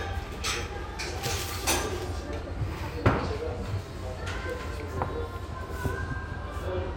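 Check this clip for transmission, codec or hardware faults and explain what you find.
One fault is present: DAB burbling, from 5.71 to 5.86 s. Weak reception let bit errors slip past the error correction into the MP2 data, corrupting samples, which put short blips of noise in single sub-bands. The disturbance spans roughly nine frames and points to a bit error rate of around 0.2 percent. The result is a brief burst of burbling laid over the sound.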